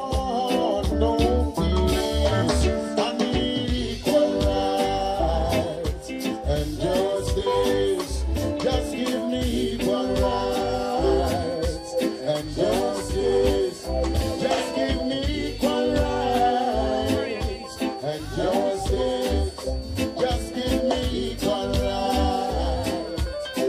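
From 9.45 s to the end, a feedback whistle sits behind the sound: a thin, steady tone at 4.5 kHz, roughly 25 dB below the signal, swelling and fading slowly in level. On a spectrogram it shows as one narrow horizontal line. The likely cause is a loudspeaker-to-microphone loop held just at the edge of feedback.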